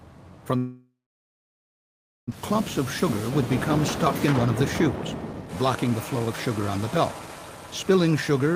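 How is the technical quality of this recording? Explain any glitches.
The recording has clear transport faults: one long gap where audio is lost, followed by several stretches where playback runs fast to recover.

From 0.57 to 2.34 s there is a long network dropout. The sound stops being delivered and, in its place, the tail of the last sound continues as a fading buzz before giving way to about 1.35 s of silence. When audio resumes near 2.34 s, roughly a second of material never plays. The likely cause is a run of lost or heavily delayed packets. The receiver concealed the gap, then skipped ahead, and playback latency ended up around 0.7 s higher.

Jitter buffer speed-up follows in three places. With extra audio now queued, the receiver trims short pitch-period-length pieces to pull the delay back down, so the sound moves faster while pitch stays unchanged. From 2.35 to 2.61 s it runs at 134% speed, dropping around a tenth of a second and sounding noticeably rushed. 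From 4.26 to 4.87 s the rate is a mild 106%, removing a few tens of milliseconds. From 5.33 to 8.55 s it runs at 116%, cutting roughly half a second and leaving an audibly hurried pace.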